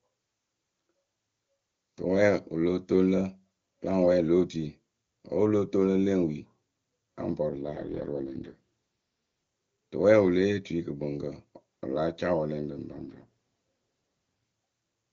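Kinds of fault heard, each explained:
AMR rate drop: the speech turns rough and synthetic from 7.50 to 8.57 s and from 12.92 to 13.26 s, which fits the codec stepping down from 23.85 to 6.6 kbit/s. A spectrogram keeps the same bandwidth with no gap, while the harmonics blur into grainy noise.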